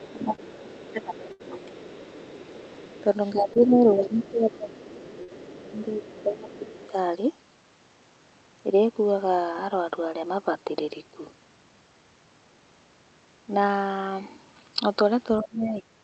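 From 0.0 to 6.9 s a faint second voice runs under the main speech, about 20 dB down: other side's voice leaking through, likely a loudspeaker echo the canceller left in.

Over the same stretch the main speech itself sinks. From 0.1 to 1.9 s, 3.33 to 4.75 s and 5.70 to 6.65 s, and again from 15.41 to 15.87 s, it dips by up to about 15, 10, 20 and 20 dB, losing its top or breaking into pieces. This is speech suppressed in double talk: likely the canceller turning everything down while both sides talk. It differs from packet loss because the sound fades or thins rather than being replaced.

At 0.35 to 0.40 s, 3.53 to 3.58 s and 5.23 to 5.30 s come short concealed packet losses. About 20, 20 and 40 ms of audio were missing, and each gap was bridged by extending the last sound. They are heard as a quick smear or wobble.

From 1.32 to 1.41 s a burst of packet loss leaves an 80 ms hole. The receiver stretched the last sound into a decaying buzz or hiss, then jumped ahead, so a piece of speech is skipped rather than merely blurred.

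Throughout, the call codec cuts the top end near 8 kHz, which fits Opus at about 32 kbps.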